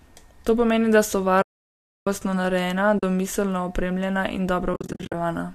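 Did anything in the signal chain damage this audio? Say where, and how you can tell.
Yes, at the network stage feeding the decoder: AAC frame loss with muting. The sound fades out softly after "pomeni da so" and returns before "narejena domiselno opremljena" (1.42 to 2.07 s, about 650 ms). Another short hole comes at 2.99 to 3.03 s, before "domiselno opremljena," and brief dropouts are scattered from 4.74 to 5.14 s, each around 50 ms at most. These are soft-edged silences, which fits the decoder zeroing the spectrum of lost frames, likely 10 ms low-delay AAC frames, while the overlapping windows fade the audio out and back in.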